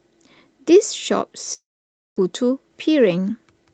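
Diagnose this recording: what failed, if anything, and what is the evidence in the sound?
Long network dropout, likely lost packets: from 1.53 to 2.24 s the last sound fades into a buzz or hiss, then 550 ms of silence; 600 ms never returns.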